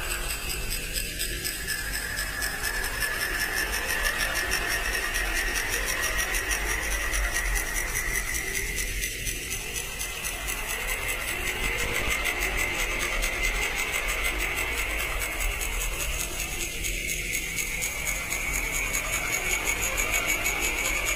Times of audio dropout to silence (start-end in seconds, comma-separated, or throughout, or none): none